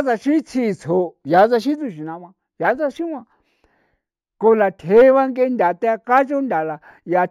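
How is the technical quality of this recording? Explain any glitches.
The recording has one fault, and it persists for the entire clip. Imaging from linear upsampling runs throughout: straight-line interpolation from what sounds like a 16 kHz source leaves faint mirror images between 8 and 16 kHz, heard as a metallic shimmer on sibilants.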